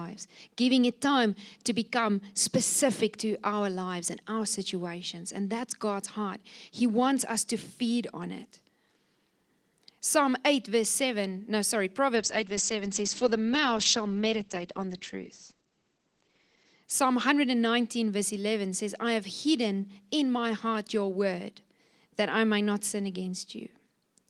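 After "no sorry", from 12.17 to 16.89 s the speech turns muffled and rough, losing everything above 8 kHz: a call bitrate drop, fitting an encoder starved to about 10 kbps.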